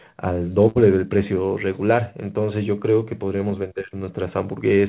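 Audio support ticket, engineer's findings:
Short stall from a late packet, 0.68 to 0.77 s: jitter buffer ran dry, last sound stretched 72 ms. Spectrogram shows frozen, smeared harmonics; waveform shows a repeated stretch, nothing missing.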